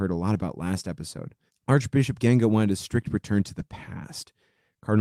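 Between "a lot" and "last episode", 0.33 to 0.39 s, and after "a strict return to", 3.59 to 3.61 s, the speech turns briefly rougher and noisier without dropping out. That is a lost packet rebuilt from error correction: the decoder played low-bitrate copies from the following packets.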